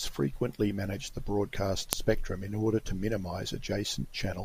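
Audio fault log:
1.93 s, file header played as audio: a sharp, loud click where a second speech piece begins, its unstripped WAV header bytes played back as samples.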